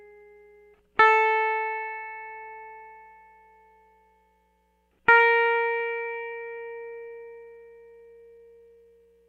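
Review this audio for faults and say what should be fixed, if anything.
Repeated stalls (stutter), 5.37 to 7.37 s: twenty-four brief dropouts, none longer than 13 ms, are filled by continuing the last sound, so the music hiccups without losing anything.

Jitter buffer slow-down, 7.45 to 9.14 s: the receiver repeats single pitch periods to rebuild its reserve, stretching the music to about 86% speed at unchanged pitch.

To prevent both, stabilise packet delivery on the network path and give the jitter buffer enough starting depth that it neither runs dry nor needs to stretch the music to refill.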